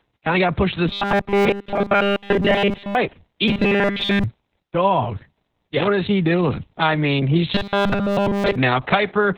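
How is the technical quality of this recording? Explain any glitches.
The quality is poor: the speech is heavily compressed throughout and turns robotic in three stretches.

Opus voice compression, throughout: the sound points to a very low-bitrate narrowband SILK coder. It is muffled and hoarse, and a spectrogram shows nothing above 4 kHz.

Robotic sound from repeated short buffers, from 0.88 to 2.95 s, 3.48 to 4.24 s and 7.54 to 8.56 s: the voice becomes a rigid 200 Hz metallic buzz, likely because a 5 ms chunk is replayed whenever new audio arrives late. Most of the first two stretches and all of the last are repeats, which appear as an identical repeating waveform and evenly spaced horizontal harmonics on a spectrogram.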